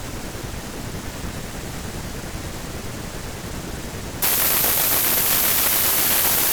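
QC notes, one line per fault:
4.22–6.53 s, wrong sample width: the audio collapses into loud broadband noise with the speech buried inside, slowed to 0.75x and pitched down to match, which fits 32-bit samples read as packed 24-bit. Spectrogram shows dense noise hiding faint, lowered harmonics.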